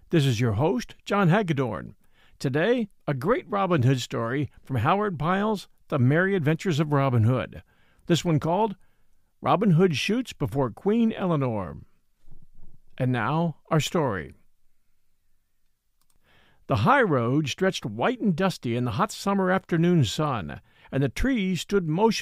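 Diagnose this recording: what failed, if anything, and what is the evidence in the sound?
Nothing stood out on listening to this speech recording that would point to a failure at any stage of the chain.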